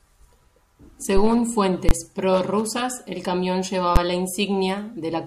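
At 1.89 to 1.91 s, just before "prorrusas el camión", and again at 3.96 s, right after it, invalid numbers at full scale replace whole blocks (about 21 ms, fitting a 1024-sample block, then about 11 ms) with pinned maximum values. Each is heard as a sharp bang, a flat slab at one extreme on the waveform and a bright full-height vertical stripe on the spectrogram.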